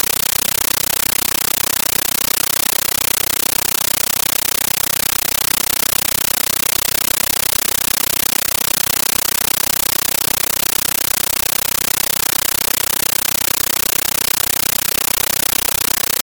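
Speech recording in which the undecoded AC-3 bitstream was taken as ordinary samples throughout, a compressed stream played as audio: the speech is replaced by very loud, chattering static, 13.3 ms noise bursts repeating 31.25 times a second.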